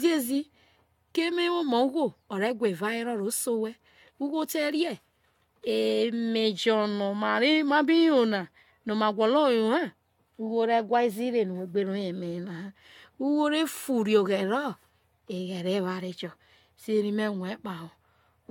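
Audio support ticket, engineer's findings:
Generation loss, throughout: swirly, hollow speech, blurred attacks, nothing above 17 kHz. Likely about four AAC passes near 96 kbit/s, each adding fresh quantisation noise.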